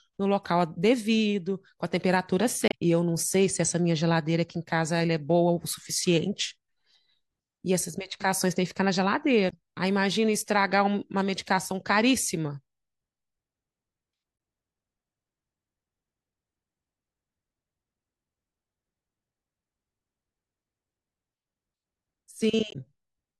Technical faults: damaged data in a compressed stream

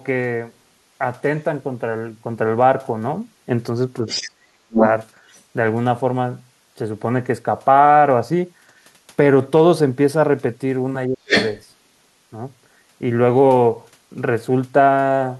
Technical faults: speech suppressed in double talk; other side's voice leaking through

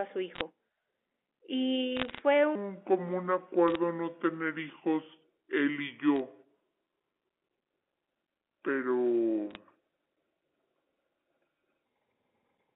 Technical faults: bit errors on a digital phone line; section at the wrong speed

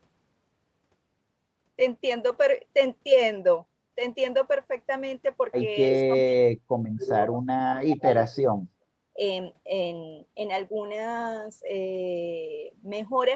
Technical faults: lost packet rebuilt from error correction; speech suppressed in double talk; background gated by the echo canceller

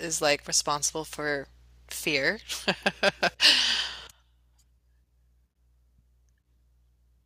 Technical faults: microphone overload

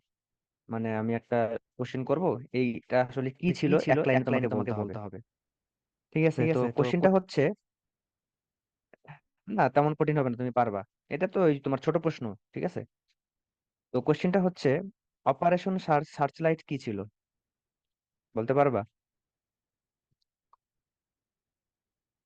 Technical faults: doubled audio track

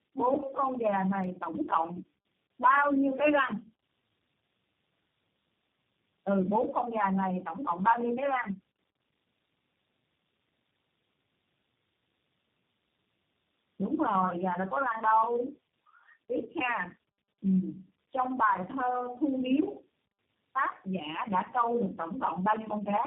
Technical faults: tandem speech coding

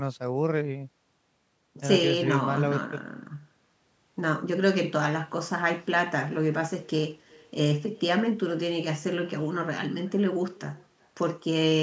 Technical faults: echo with no canceller

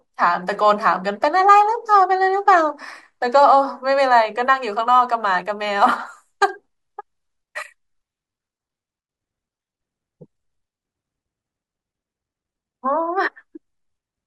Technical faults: none

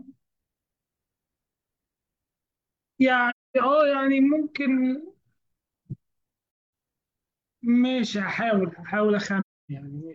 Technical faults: AAC frame loss with muting

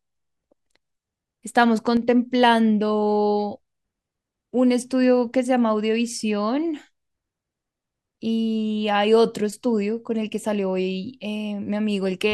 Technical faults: one channel drops out

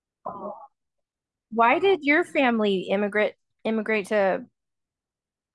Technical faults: none

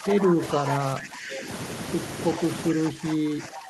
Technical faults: speech suppressed in double talk; echo leak

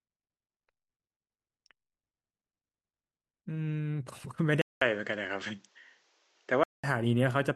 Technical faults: input switched to a poorer device

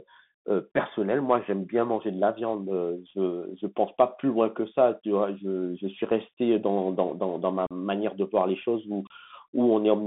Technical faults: Bluetooth CVSD headset codec; unconcealed Bluetooth headset packet loss

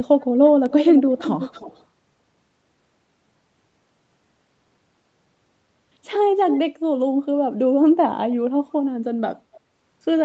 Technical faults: echo leak

